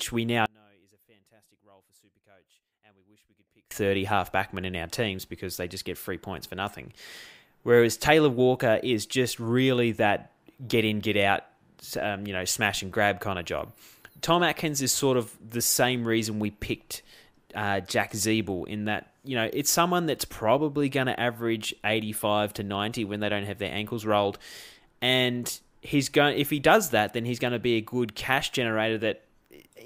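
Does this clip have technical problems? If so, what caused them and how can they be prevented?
Yes. One channel inverted, from 0.46 to 3.71 s, just after "we now": the speech falls by about 33 dB to a faint residue, likely because one stereo channel's polarity was reversed, so the centred voice cancels when both channels sum to mono. Prevent it by checking polarity on every channel and monitoring a mono fold-down before release.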